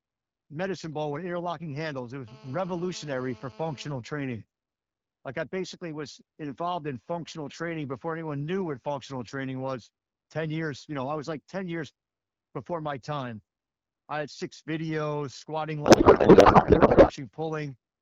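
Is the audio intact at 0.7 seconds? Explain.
Yes, the audio is intact at 0.7 seconds, with no fault at that moment.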